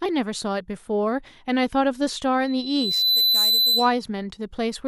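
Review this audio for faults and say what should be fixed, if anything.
Loudspeaker feedback squeal, 2.44 to 4.02 s: the microphone picks up its own loudspeaker, loop gain passes one at 4 kHz, and a pure tone swells over about 0.7 s to a few dB above the speech. A spectrogram shows a bright 4 kHz line, and the waveform envelope grows. To prevent it, lower the monitor gain, keep the microphone out of the loudspeaker's path, or notch out 4 kHz.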